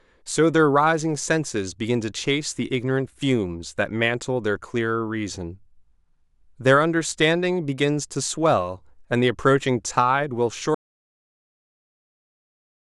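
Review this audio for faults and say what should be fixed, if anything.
The input signal was likely lost at 10.75 s, perhaps through a disconnected device or an accidental mute, while the recorder kept writing silence. This audio dropout to silence cuts the speech off mid-flow and leaves silence, with no room tone, through to the end. Monitor input levels during recording and secure cables and mute controls so a lost signal is caught and the take repeated.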